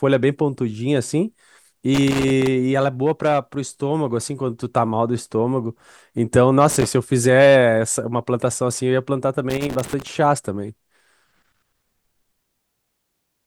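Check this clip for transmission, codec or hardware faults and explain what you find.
There is a hardware fault in this speech clip: loose connector crackle, in three separate bursts, at 1.94 to 2.47 s, 6.70 to 6.86 s and 9.50 to 10.07 s. A worn or dirty contact somewhere in the cable path is making and breaking as it shifts, so the signal is chopped on and off within each burst. The result is an irregular scratching crackle lasting from about 0.16 s to roughly half a second at a time.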